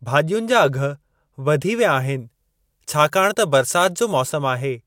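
From 2.19 to 4.30 s, pre-emphasis was left on. A treble boost following the CD 50/15 µs curve was applied without the matching de-emphasis. That leaves high frequencies about 8 dB hot at 10 kHz relative to 1 kHz, so the speech turns thin, bright and sibilant.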